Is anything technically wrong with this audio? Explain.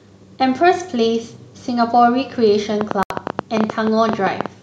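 Yes, two faults overlap near the end of this speech clip.

From 2.81 to 4.47 s there is a train of clicks, likely from electrical interference or a faulty connection or power supply injecting pulses. About fifteen similar clicks arrive at an uneven pace, near 9.9 per second, peaking about 15 dB above the speech and ticking audibly over it.

At 3.03 s a Bluetooth stall occurs: the headphones' buffer probably ran empty while delayed packets were resent. The sound drops to silence for 74 ms, until 3.1 s, then resumes. Clicks are also heard around this gap.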